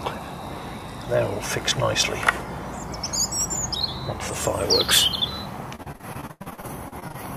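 Repeated packet loss (robotic sound), 5.75 to 7.16 s: frequent dropouts up to 90 ms are filled by extending earlier audio, sounding choppy.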